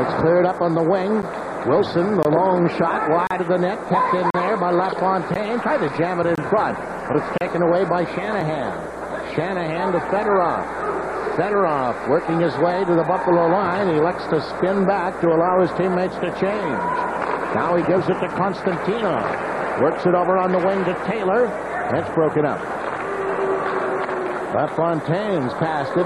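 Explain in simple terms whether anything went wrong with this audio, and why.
Something did go wrong: the sound briefly drops to silence at about 1.22, 2.23, 3.27, 4.30, 5.34, 6.35, 7.38 and 8.41 seconds. That's a gap between stream segments. The audio arrives in chunks, here spaced in a way that fits one-second pieces, and the timing between chunks left small holes that the player filled with silence. Each dropout has hard edges and lasts from about 3 to 39 milliseconds. Nothing is actually missing.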